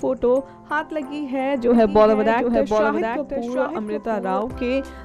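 From 1.74 s to 4.42 s a second, full-band copy of the audio trails the original by about 0.7 s, roughly 5 dB quieter, starting and stopping abruptly with no decay or room colour: a doubled audio track, likely from the same signal being captured twice through a slower path.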